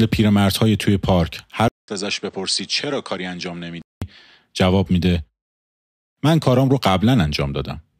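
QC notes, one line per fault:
1.68–4.02 s, input switched to a poorer device. A 200 ms silence opens at 1.68 s. The speech then drops by roughly 10 dB and turns dull, with nothing above 8.8 kHz. New background noise sits about 35 dB below it. A weaker microphone is the likely cause.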